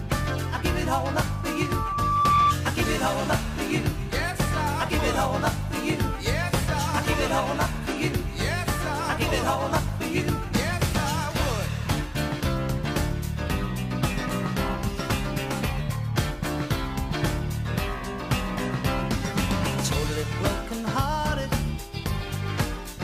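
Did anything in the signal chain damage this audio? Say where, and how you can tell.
Yes: loudspeaker feedback squeal from 1.18 to 2.57 s in the acoustic path. A 1.2 kHz tone swells over roughly a second to about 10 dB above the signal as mic-to-speaker loop gain exceeds unity.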